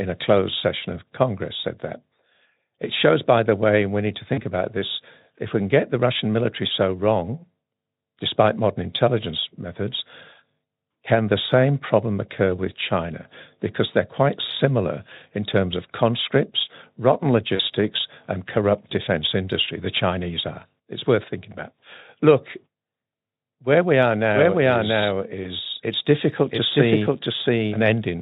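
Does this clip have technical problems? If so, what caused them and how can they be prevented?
Yes, there are two kinds of problem.

VoIP packet loss concealed by the speech codec happens at 4.33 to 4.41 s, between "and we need to" and "about this if we"; at 17.55 to 17.61 s, just after "terms of conscripts rotten"; and at 25.43 to 25.52 s. Each gap covers 40, 40 and 20 ms of missing audio. The decoder patches them by repeating its last pitch and spectral shape at falling gain, so you hear a short buzzy or noisy smear, and the sound takes a moment to firm up again afterwards. The Speex coding around these spots sounds clean. To prevent it, use a wired or more stable network, a larger jitter buffer, or forward error correction.

A doubled audio track starts at 24.34 s, right after "where we are", and runs to the end. A second, full-band copy of the same sound sits about 0.7 s behind at roughly equal level, with no room decay, and it cuts in abruptly. 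That points to the audio likely being captured twice, with a slower second path mixed back in. To prevent it, route only one capture source into the recording or call.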